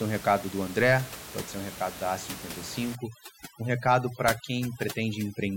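From 2.95 s to the end at 5.56 s, the background behind the speech drops and breaks up into twinkling specks. This is overdone noise removal: a noise reduction stage set too aggressively switches individual frequency bands down or off whenever they sit close to its noise estimate, stripping the quieter parts of the voice with them. Before that point, room noise sits about 12 dB below the speech.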